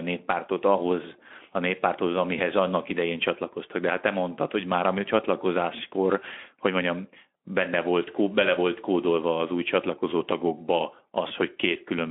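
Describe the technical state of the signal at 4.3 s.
At 4.3 s the speech passes intact, with no dropout, glitch or other fault, just the slightly hoarse, telephone-narrow sound of its Speex coding.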